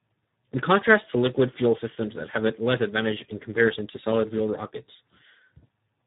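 Throughout the speech, Speex codec damage is heavy: with too few bits for the CELP excitation, voicing turns hoarse and noisy, consistent with a low setting around 8 kbps. Nothing sounds above 3.8 kHz, and the buzzy roughness is what separates it from plain band-limiting.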